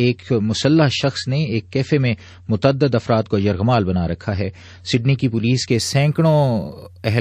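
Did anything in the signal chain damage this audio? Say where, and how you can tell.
Yes, and it's at the playback end, where an adaptive stream started at a low bitrate. From 0.0 to about 5.71 s the top end is simply gone, with nothing above 8.3 kHz, and the codec artefacts are stronger. Then it jumps cleanly to better quality with no gap. That's what you'd expect if the player grabbed a cheap MP3 rendition, something like 34 kbit/s, to start fast, then switched to one around 128 kbit/s once it had measured the connection.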